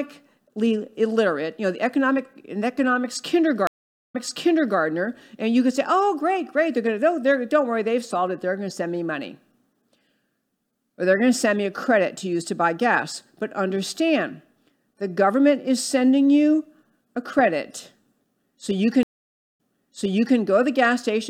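Speech with two stream reconnects: a blank gap on waveform and spectrogram after "the economic an economics" at 3.67 s (about 443 ms) and after "so you" at 19.03 s (534 ms). A fresh decoder restarted mid-stream and the server resent audio, so playback resumes 0.68 s and 0.81 s earlier, repeating material.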